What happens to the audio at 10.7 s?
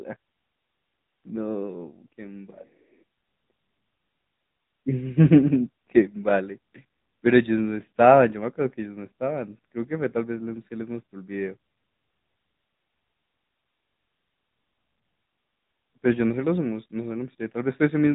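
At 10.7 s the speech carries AMR narrowband mobile codec damage, which runs through the whole clip rather than starting there. The codec rebuilds the voice from a vocal-tract model excited by a few pulses per 5 ms subframe, giving a plainly audible buzzy, synthetic edge that fits a bitrate of about 10 kbps. A spectrogram shows a flat ceiling at 3.8 kHz with nothing above it, and the waveform lacks fine high-frequency detail.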